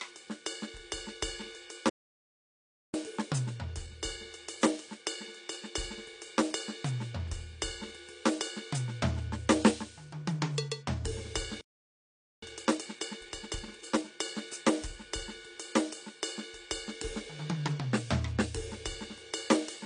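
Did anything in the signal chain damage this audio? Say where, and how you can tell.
Yes. AAC compression runs throughout. At the codec stage, the music sounds dull with nothing above 10 kHz, and the coding damage is plainly audible. That points to a low bitrate of around 32 kbps. The likely cause is AAC-LC quantising its frequency lines so coarsely that the top band is dropped.

Playback stalls occur at 1.89 to 2.94 s (about 1.04 s) and 11.61 to 12.43 s (about 0.81 s). The music cuts out mid-flow into silence, then resumes. At the playback buffer stage, the likely cause is the player running dry of data or its thread being blocked.

Time-compressed catch-up follows each stall, at 2.94 to 5.94 s at 1.1 times speed and at 12.43 to 14.05 s at 1.5 times. The music is hurried while the pitch stays put, because the player trims and cross-fades small slices to clear its backlog.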